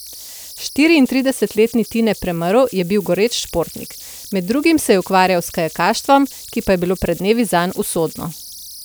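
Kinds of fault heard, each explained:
Converter idle tones: an undithered delta-sigma converter locks into repeating bit patterns whenever its input runs small, producing tones set by the input offset. Throughout this speech, a thin whistle near 5 kHz, about 20 dB below the signal, sings through pauses and roughens quiet passages.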